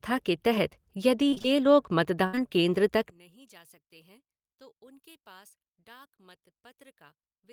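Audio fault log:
1.29–1.60 s, repeated packet loss (robotic sound): four gaps totalling 80 ms, longest 28 ms, each filled by extending prior audio, so about half this stretch sounds choppy and robotic.
2.27–2.35 s, burst of packet loss: roughly 60 ms of audio lost, bridged by a held, fading continuation of the last sound before playback resumes further on.
2.35–2.39 s, short concealed packet loss: a further 20 ms gap, just before "केन्द्र तक", patched by synthesised continuation and heard as a brief smear.
3.10–7.52 s, one channel inverted: after "केन्द्र तक" the centred speech drops by about 30 dB, likely one stereo channel with reversed polarity cancelling common content when summed to mono.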